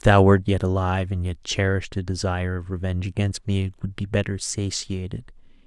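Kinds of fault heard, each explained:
No faults detected on listening; the speech signal path shows nothing to flag.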